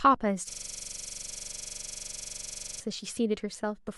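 From 0.51 s to 2.8 s the speech gives way to a harsh, rapid rattle, a low buzzing stutter at about 23.4 Hz as one 42.67 ms fragment repeats, identical each time, roughly fifty times over. This is a system hang loop: the machine or its audio driver stalled, and with no fresh samples arriving, the sound hardware kept replaying the same ring buffer. The loop length fits a 2048-sample buffer.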